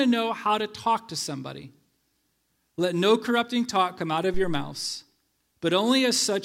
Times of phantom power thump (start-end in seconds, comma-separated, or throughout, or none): 4.34-4.77